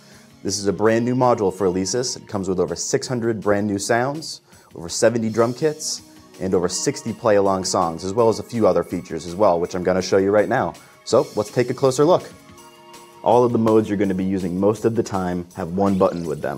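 At 13.68 s, running to about 13.70 s, there's a single loud pop that jumps out roughly 10 dB above the surrounding sound, which keeps going underneath it. That's a sudden voltage step or pulse landing on the signal, likely from a plug, a switch, static or a driver glitch, and the downstream circuitry shapes it into that short, sharp hit. It lasts only a couple of hundredths of a second.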